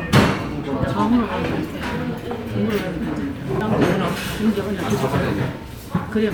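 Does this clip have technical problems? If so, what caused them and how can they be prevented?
Yes. There is a CD skip at about 3.60 s. The audio drops out for only a few milliseconds, heard as a brief tick. Playback then resumes from a different point. A knock or a flaw on the disc made the laser jump to another turn of the spiral track. The player muted briefly and carried on from there, so the sound jumps abruptly. To prevent this, keep discs clean and undamaged and isolate the player from vibration.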